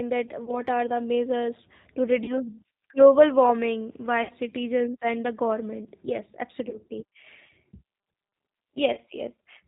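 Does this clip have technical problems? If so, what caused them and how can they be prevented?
Yes. Throughout, the speech carries G.729 codec damage: a plainly rough, synthetic quality with nothing above 4 kHz, consistent with an 8 kbit/s stream modelled from filter, pitch and pulses. Using a wideband codec such as G.722 or Opus prevents this.

VoIP packet loss concealed by the speech codec occurs at 0.45–0.61 s, 2.24–2.39 s, 4.23–4.31 s, 6.69–6.77 s (just after "the government yes") and 8.93–8.99 s. At each point the decoder stretches its last pitch and filter into a fading buzzy tone or coloured noise. The gaps run 20 to 60 ms, which fits one to three lost packets, and the damage lingers after the packets resume. A stable network with QoS prioritisation, an adequate jitter buffer, or forward error correction prevents these dropouts.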